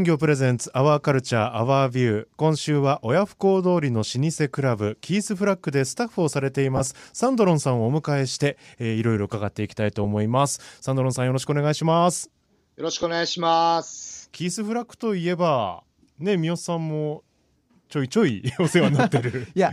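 A speech recording, most likely carried over a Bluetooth LE Audio link using the LC3 codec, has lost LE Audio frames at four points: 6.77 to 6.81 s, and then at 10.04 s, 13.02 s and 15.01 s. The first gap covers about 30 ms and the others about 10 ms each, which suggests a run of three frames and then single frames of 10 ms. Unlike an ordinary dropout, these gaps never fall silent. The decoder fills each one by replaying the last spectrum with scrambled phase, so the sound becomes a brief noisy smear.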